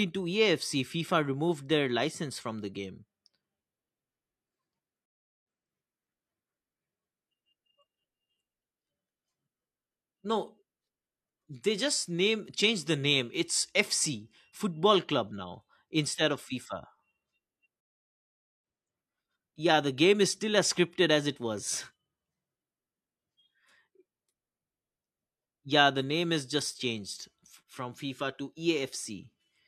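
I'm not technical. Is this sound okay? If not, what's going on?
No. A stream reconnect happens twice: the connection dropped and playback restarted. At 5.06 s the speech cuts out briefly, then repeats a fraction of a second. At 17.80 s it goes silent for 0.8 s, and roughly 0.7 s of speech is lost.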